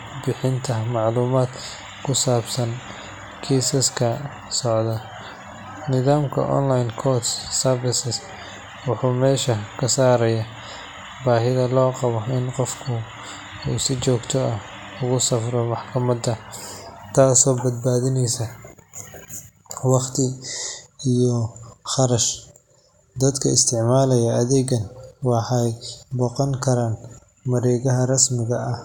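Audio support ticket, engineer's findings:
No faults found on listening.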